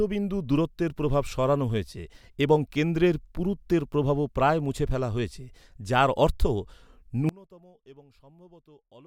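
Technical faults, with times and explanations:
7.29 to 9.07 s, one channel inverted: From 7.29 s to the end, the speech suddenly drops by about 27 dB and nearly vanishes. What remains is a faint trace. The likely cause is reversed polarity on one stereo channel. When the two channels are summed to mono, everything they share cancels. Centred speech is shared almost completely, so it disappears. Only the small difference between the channels survives.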